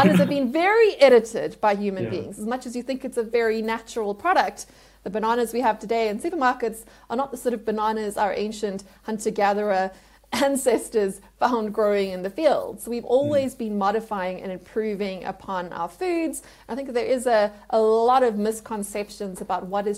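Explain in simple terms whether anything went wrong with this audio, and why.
Nothing went wrong here: the signal holds steady all the way through, with no dropouts, glitches or distortion to be heard at any point.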